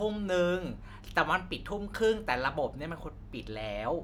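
No audible faults turn up anywhere in the recording.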